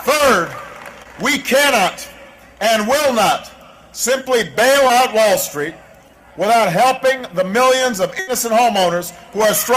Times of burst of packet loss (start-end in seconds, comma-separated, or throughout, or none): 8.19-8.29